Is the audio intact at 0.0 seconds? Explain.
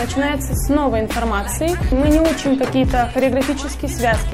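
Yes, the audio is intact at 0.0 seconds, with no fault present at that moment.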